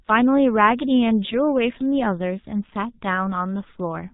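Speech, heavily degraded by G.723.1 codec damage from start to finish: muffled and hoarse, consonants smeared, sounding like a low-rate stream of about 6 kbit/s. On a spectrogram, energy stops sharply at 4 kHz, with blocky, coarsely stepped harmonics from its slow 30 ms frame updates.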